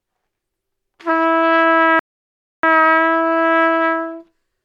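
At about 1.99 s the audio hits a rebuffering stall: the player ran dry of downloaded data and simply waited. You get roughly 0.64 s of dead silence until 2.63 s, then the sound picks up exactly where it left off, with nothing skipped, just time added.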